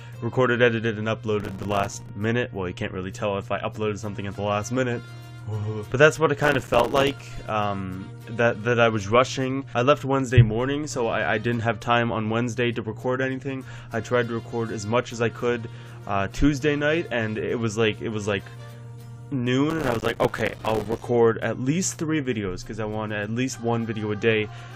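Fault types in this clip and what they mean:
processor overload crackle: three bursts of gritty crackle at 1.40 to 2.09 s, 6.39 to 7.20 s and, longest, 19.70 to 21.03 s, built from dozens of tiny hard-edged silent gaps. The processor kept missing deadlines for very short buffers, which fits a buffer of a few milliseconds.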